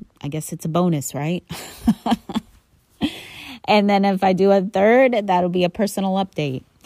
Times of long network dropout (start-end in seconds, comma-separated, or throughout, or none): none